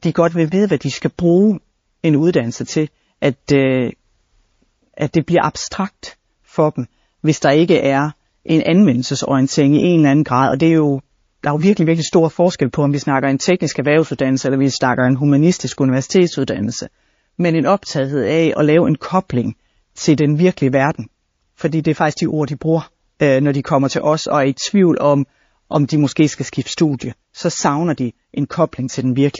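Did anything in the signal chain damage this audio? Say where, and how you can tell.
Yes, the damage sits at the codec stage, and it runs through the whole speech clip rather than showing up at any one moment. S sounds come out chirpy and metallic, and the background has that watery, swirling quality as quiet detail flickers in and out. That's the signature of MP3 compression, likely at a low bitrate around 32 kbps, where the encoder runs out of bits and discards weaker frequency content frame by frame.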